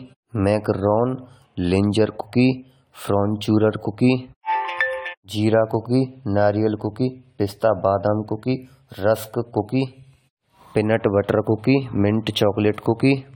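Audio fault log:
Throughout: generation loss. The speech sounds swirly, hollow and smeared, with softened consonant attacks, more damaged than one encode at this quality would leave it. That points to an AAC-style codec near 96 kbit/s, likely re-encoded several times, each pass adding new quantisation noise and holes.
3.80 s: block of digital silence. A 2 ms block of silence cuts in and out with no fade, so it is heard as a single tick rather than a gap. The hard edges at both ends separate it from a smoothly faded dropout.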